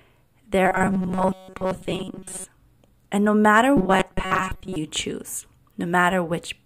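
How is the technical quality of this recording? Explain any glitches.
The speech is marred twice by a robotic sound from repeated short buffers, from 0.64 to 2.44 s and again from 3.77 to 4.77 s. The likely cause is new audio arriving too seldom, so a chunk of about 5.3 ms is replayed over most of each stretch while real speech is skipped, forcing a rigid metallic buzz at 188 Hz.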